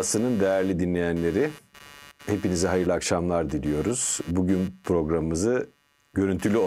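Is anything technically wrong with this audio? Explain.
Yes. Computer activity noise runs through the whole recording, sitting roughly 25 dB below the speech. It is a buzzy, scratchy pulsing at around 150 pulses per second that rises and fades on its own schedule, unrelated to the speech. Changing load on the computer's processor, graphics hardware or mouse drags the ground shared with the audio circuitry, so that electrical activity leaks into the signal as an audible chirp and buzz.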